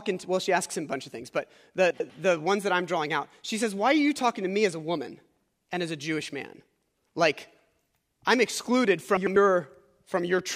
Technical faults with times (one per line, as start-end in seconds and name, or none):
1.90-2.10 frames out of order
9.17-9.36 frames out of order